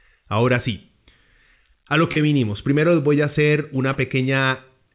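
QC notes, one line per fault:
2.12–2.19 s and 3.93–3.98 s, short concealed packet loss: right after "a lo" and after "les voy a hacer", roughly 30 ms of audio went missing. The receiver stretched the preceding sound to bridge each gap, so each one is heard as a brief smear. The sound is band-limited to 4 kHz throughout, as expected for a G.711 A-law call path.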